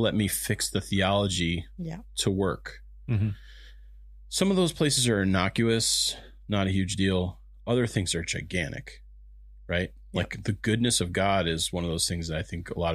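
Mains hum runs through the whole speech recording: an earth loop or a transformer nearby has let the 50 Hz power line leak into the signal path. It sits as a constant low drone under the speech, roughly 20 dB below it, with some low harmonics.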